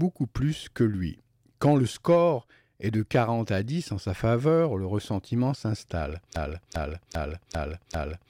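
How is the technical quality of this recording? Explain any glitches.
A broken-record loop mars the recording. From 6.36 s to the end, a 0.40 s fragment of speech repeats five times back to back, likely from a stalled player or stream resending its last buffer, so the audio that belonged there is lost.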